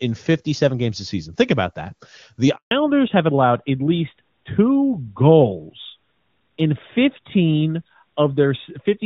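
At 2.55 s the call is handed from one network to another, and during the switch no speech frames reach the receiver. This handover gap lets the speech die away within a few tens of milliseconds and leaves 160 ms of silence, lasting until 2.71 s when the new link begins carrying audio.

From 2.71 s to the end, the call falls back from wideband HD Voice to a narrowband codec, consistent with AMR-NB at 12.2 kbit/s. This fallback to narrowband removes everything above 4 kHz, so the speech sounds duller and rougher for the remainder of the clip.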